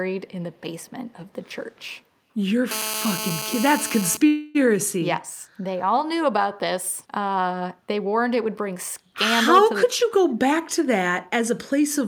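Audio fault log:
0.86–0.90 s and 1.73–1.97 s, echo leak: a very faint, delayed copy of the speech sits under the main signal in these two short stretches, trailing it by about 150 ms. This is likely a far end listening on a loudspeaker whose echo canceller failed to fully suppress what its microphone picked up, so a residue of the sound was sent back down the line. The copy is so quiet that it registers more as a thin shadow than a distinct repeat.
2.71–4.17 s, GSM phone buzz: a hard, raspy buzz at 217 Hz, rich in harmonics, runs steadily for about a second and a half at roughly 7 dB below the speech, loud enough to compete with it. A nearby 2G handset on an active call transmits in regular radio bursts at that rate, and the audio circuitry rectifies those pulses into sound, which is why the buzz is unrelated to the speech and holds a constant pattern.
4.27–4.57 s, call audio freeze: the sound stalls for about 273 ms. 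The last bit of audio is stretched into a sustained, decaying tone rather than dropping to silence, and then the speech resumes exactly where it left off. This is likely a jitter buffer running dry while packets were held up in transit. The receiver bridged the wait with synthesized sound, so nothing was lost, but a pause was inserted into the flow.
9.74–11.98 s, jitter buffer speed-up: over these final two seconds or so the speech runs about 4 percent fast while its pitch stays unchanged. The buffer had built up more audio than its target, and to bring the delay back down the receiver trimmed out many short slices of one or a few pitch periods each. In total about a tenth of a second was removed.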